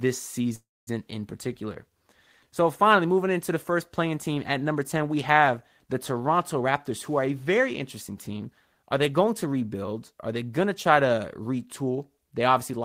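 At 0.55 s the speech stops moving forward: the last sound is drawn out as a buzz or hiss that fades, then about 240 ms of silence follows before the audio resumes at 0.89 s from exactly where it left off. This is a call audio freeze, likely caused by packets being held up in transit so the jitter buffer ran dry. The receiver filled about 317 ms while waiting. Nothing was lost, but the rest of the clip now runs that much later.

From 6.60 s to 10.68 s, ending just before "to try to", the speech sounds hurried, running at 108% speed while the pitch stays where it was. This is a jitter buffer speed-up. The buffer had built up more audio than its target, so the receiver cut out short pieces of one or a few pitch periods over and over to bring the delay back down, removing roughly a third of a second in total.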